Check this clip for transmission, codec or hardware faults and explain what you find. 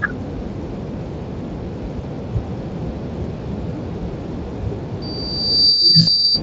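Two kinds of fault are present in this speech recording: VoIP packet loss concealed by the speech codec, heard twice, and a loudspeaker feedback squeal at the end. The light Speex coding underneath is normal.

VoIP packet loss concealed by the speech codec occurs at 2.01–2.07 s and again at 6.01–6.09 s. The first gap is about 20 ms, which fits one lost frame, and the second is about 60 ms. The decoder extends its last pitch and filter while lowering the gain, so the sound smears into a brief buzzy tone or coloured noise that fades before recovering. On a waveform the envelope sags smoothly. A spectrogram shows repeated, flattened harmonics.

A loudspeaker feedback squeal runs from 5.02 s to 6.42 s. The microphone picks up its own loudspeaker, and at 4.7 kHz the loop gain exceeds one. The tone grows over roughly 0.7 s into a piercing whistle about 15 dB above the speech. A spectrogram shows a bright horizontal line at 4.7 kHz, and the waveform's amplitude swells steadily.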